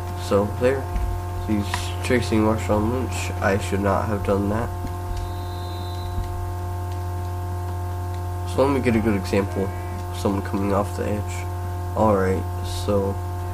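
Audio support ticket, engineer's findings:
No faults found on listening; nothing to escalate.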